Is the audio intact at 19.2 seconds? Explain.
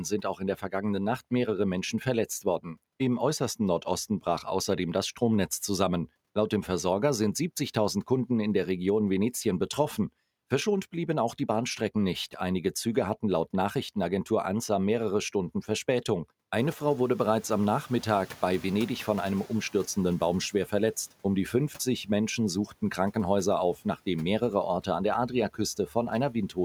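No. At 19.2 s the clip is inside a span of noise suppressor catching up, running from 16.56 to 19.86 s. The room noise jumps by about 18 dB at around 16.5 s, and the suppressor's noise estimate takes 3.3 s to adapt, so the noise passes through at first and then sinks by about 7 dB. On a spectrogram the noise floor brightens abruptly, then fades toward 19.86 s; the waveform's baseline thickens, then narrows.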